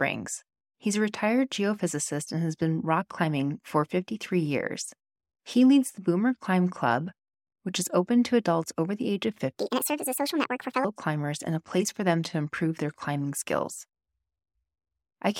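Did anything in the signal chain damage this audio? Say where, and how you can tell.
Yes: a section at the wrong speed, 9.55 to 10.84 s after "over the age of", plays 1.59 times fast. Pitch rises with it, unlike time-stretching, likely from a playback clock mismatch.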